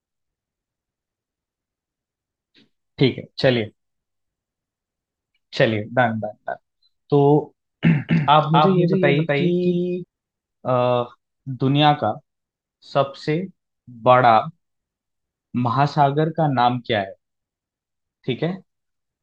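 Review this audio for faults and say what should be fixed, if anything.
Doubled audio track, 8.08 s to 10.04 s: the speech is joined by a second, full-band copy of itself trailing about a third of a second behind and at roughly the same level. It carries no reverb or room colour and cuts in and out abruptly at both ends, so it is a duplicate signal, not an acoustic echo. The likely cause is the same source being captured again through a slower path, or an edit leaving two misaligned copies overlapping. Prevent it by routing each source through a single capture path and checking edits for overlapping duplicate regions before export.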